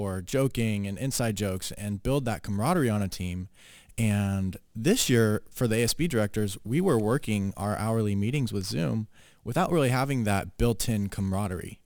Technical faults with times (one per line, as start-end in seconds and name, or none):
0.00-11.86 crude rate conversion